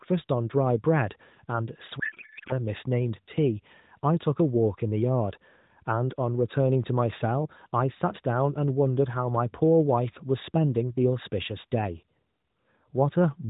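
From 2.00 to 2.53 s the speech turns into garbled noise and warble that barely tracks it, a codec payload misread. Sender and receiver disagreed on bit packing: octet-aligned AMR frames were read as bandwidth-efficient. The decoder took valid-looking frames with every field shifted. It lasts about half a second, until the formats agree again. Around it, the AMR narrowband mobile codec shows light damage and nothing above 4 kHz, consistent with 12.2 kbps.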